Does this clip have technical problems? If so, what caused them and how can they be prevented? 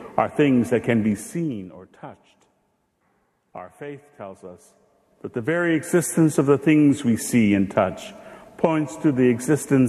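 Yes. Zipper noise runs from 4.72 to 6.0 s: a level change of about 15 dB is applied in 1 dB steps, roughly 30 per second, without smoothing, so each jump clicks and a zipping texture rides the sound. Interpolating gain per sample prevents it.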